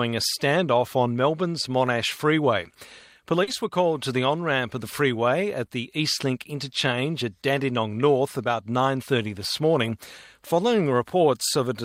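At 3.43 to 3.49 s and again at 5.65 to 5.69 s, short concealed packet loss: about 40 ms, then 20 ms, of audio arrived too late, and the receiver extrapolated the preceding sound before blending back. Each gap is heard as a brief smear or wobble rather than a silent dropout or sharp click.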